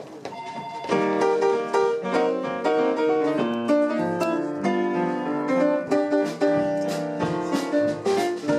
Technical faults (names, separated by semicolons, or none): none